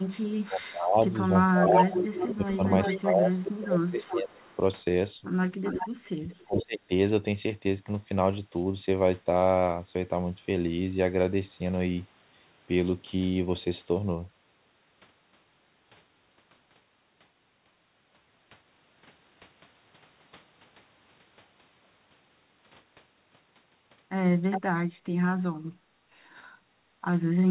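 From 0.0 to 0.7 s a faint echo leak trails the speech by 434 ms, about 25 dB down. The far end likely used a loudspeaker, and its echo canceller let part of the return through. From 0.39 to 4.5 s the speech is suppressed in double talk. The level dips by up to about 20 dB, in pieces totalling roughly 3 s. Both sides speak at once, and the canceller likely turns the talker down with the echo.

Overlapping that stretch, from 1.84 to 4.56 s, a much stronger echo leak runs 394 ms behind, only about 5 dB below the speech. It sounds like a second copy. A shorter leak follows from 5.63 to 5.89 s, also at 394 ms, about 10 dB down.

From 6.06 to 6.91 s double-talk suppression returns, harder, with drops near 40 dB over roughly 0.7 s. The speech nearly cuts out there.

Brief echo bursts at 408 ms, about 5 dB down, sit at 6.58 to 6.65 s and at 24.5 to 24.61 s. All of this rides on a band that stops at 4 kHz, which fits G.711 mu-law.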